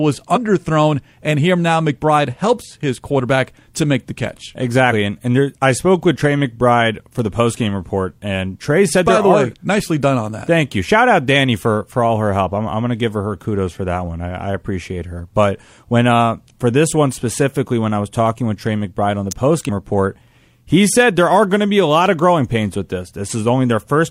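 At 7.19 s and again at 19.31 s, a sharp snap cuts across the speech. Each is an electrical switching spike, a brief arc picked up by the audio line. A nearby switch or motor is the likely cause. The snaps sit on top of the speech.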